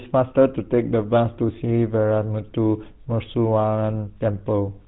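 Throughout the speech, the GSM full-rate codec leaves a plainly audible buzzy, gravelly roughness, consistent with a 13 kbps coder that rebuilds the voice from sparse, regularly spaced pulses. Unlike a simple telephone band-limit, which only dulls the sound, nothing passes above 3.9 kHz and the grit is also there.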